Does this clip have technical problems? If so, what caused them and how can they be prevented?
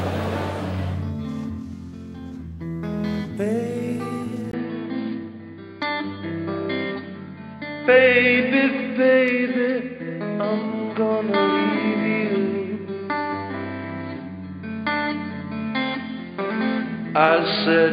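Yes. At 4.51 s the input likely switched to a poorer device: after a 20 ms gap, the sound turns dull and narrow, with nothing above 4.8 kHz, a level shift of about 5 dB and a faint new background hiss. Locking the recording input to one device, and disabling automatic switching to headset call profiles, would prevent it.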